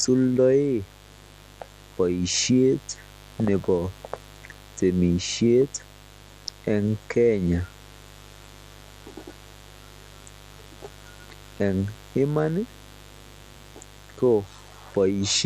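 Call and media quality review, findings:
Mains buzz throughout the speech, steady and raspy, sitting roughly 25 dB below the talker. Built on 50 Hz harmonics reaching into the kilohertz range. Probable component: dimmer, rectifier or unshielded cable. Switching spikes, twice per mains cycle, leak into the signal path.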